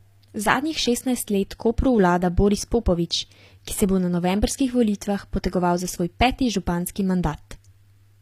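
From start to finish the speech has bright but gritty treble, with s sounds turning metallic and lispy. This is likely HE-AAC compression: the top band is rebuilt from copied lower bands, so its harmonics don't line up, consistent with roughly 24 kbps.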